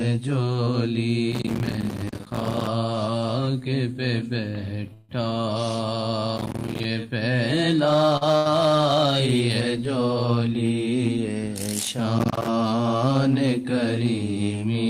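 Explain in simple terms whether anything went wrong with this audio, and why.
Quite a bit went wrong. Hard clipping runs through the whole clip: the loudest peaks were pushed past what the system could pass, so their tops got sliced flat and crackle.

Processor overload crackle shows up three times, from 1.32 to 2.67 s, 6.37 to 6.85 s and 12.19 to 12.48 s. The computer kept missing deadlines for tiny chunks of audio, each only a few milliseconds long, and every miss left a silent gap.

At 4.93 to 5.11 s there's a call audio freeze. The sound gets held for about 0.16 s, most likely because network packets were delayed, and then it picks up right where it stopped, so nothing is lost.

A short stall from a late packet hits around 8.2 s. The sound is held for about 40 ms while a packet ran late, then it carries on with nothing missing.

Right after that, from 8.37 to 8.47 s, a burst of packet loss drops about 80 ms. 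The receiver stretched the last sound and faded it out, then jumped ahead, skipping that piece.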